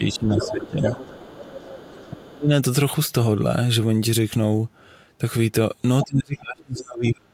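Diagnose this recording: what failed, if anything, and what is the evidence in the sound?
Speech suppressed in double talk shows up in call processing: the talker dips by about 10 dB from 0.0 to 0.91 s, about 25 dB from 2.1 to 2.5 s, and about 35 dB from 6.03 s to the end. The waveform envelope sags, likely because the echo canceller turned both sides down.

The other side's voice is leaking through, likely also from call processing: a faint scrap at 0.10 to 0.18 s, about 30 dB below the talker, then a stronger stretch at 0.39 to 2.13 s and a brief burst at 6.01 to 6.06 s, both about 10 dB down. On a spectrogram these appear as a second, unrelated harmonic pattern under the main one.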